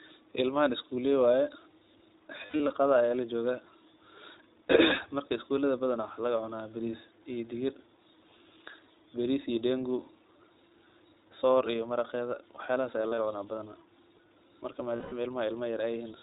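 iLBC codec, throughout the 16-second speech clip: the whole recording has been squeezed through a narrowband VoIP codec that cuts everything above 4 kHz, so sibilants lose their edge and the voice sounds dull and boxed in. The damage is plainly audible as a rough, slightly synthetic grain on every syllable. That texture, and the way each short block of sound is coded on its own, points to iLBC's 15.2 kbps mode with 20 ms frames.

Lost iLBC frames, at 2.38 to 2.72 s, 12.98 to 13.20 s and 14.96 to 15.14 s: packets went missing, and the decoder filled each hole by repeating the last pitch cycle blended with noise. In the first event about 160 ms of audio is missing, scattered across roughly 320 ms, with the longest single gap around 70 ms. The second loses about 100 ms spread over 200 ms, with the longest gap around 40 ms. The third loses about 160 ms. Each dropout sounds like a briefly held, buzzy vowel. 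Because every frame decodes independently, the voice snaps back cleanly as soon as packets arrive again.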